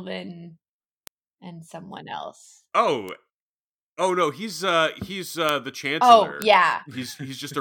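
Four bit error spikes cut through the speech, at 1.07 s just before "and someone else", 3.09 s just after "and someone else", 5.49 s after "no he's uh he's", and 6.42 s. In each, one flipped bit throws a single sample to about -9, -15, -3 and -3 dBFS before it snaps back. Each is heard as a sharp, isolated tick unrelated to the voice. On the waveform it is a lone one-sample needle, and on the spectrogram a thin vertical line spanning all frequencies.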